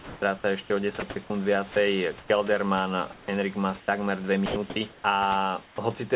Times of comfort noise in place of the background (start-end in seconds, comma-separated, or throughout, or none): 3.12-3.28, 3.80-3.88, 5.66-5.78